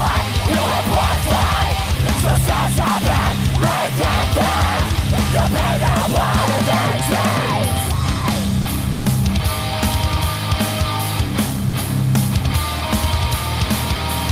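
The sound drops out briefly three times: 40 ms at 8.61 s, 140 ms from 8.91 to 9.05 s, and 40 ms at 11.69 s. This is likely sound dropped by the voice detector. Opus DTX judged the audio as background, stopped sending, and comfort noise filled the gaps.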